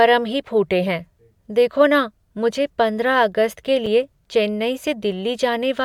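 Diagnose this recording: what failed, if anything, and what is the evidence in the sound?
A gap between stream segments at the playback stage. At 3.86 s, just after "मुझे पंद्रह अगस्त के", the speech drops to about 5 ms of hard-edged silence. Misaligned segment timestamps left a hole that the player filled with silence.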